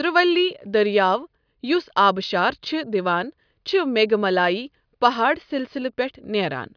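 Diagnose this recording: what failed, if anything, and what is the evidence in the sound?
No faults found anywhere.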